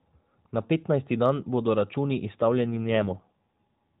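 From 2.51 s to 3.99 s, right after "petnajsti dan bodo računi", an AMR rate drop makes the speech rougher and more synthetic. The added roughness fits the codec stepping down from its 12.2 kbps mode to about 5.9 kbps to protect a weak link. Unlike a dropout or bandwidth switch, there is no gap, and the narrowband ceiling stays unchanged.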